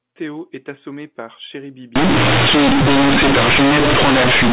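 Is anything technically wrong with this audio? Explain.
Yes. From 1.96 s, right after "est assommé par", to the end, companded audio is read as linear: A-law bytes play as raw 8-bit samples without expansion, so each sign change swings half the range. It sounds harsh and buzzy, with loud noise in pauses. The waveform is bent out of shape, with quiet sounds as large as loud ones, and the spectrogram fills with dense noise up to 4 kHz.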